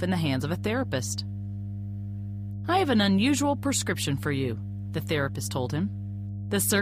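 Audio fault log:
Throughout: mains hum. The power line is leaking into the signal, probably through a ground loop or a transformer sitting close to the wiring, and adds a steady low 50 Hz tone with some low harmonics above it, loud at around 10 dB below the wanted audio.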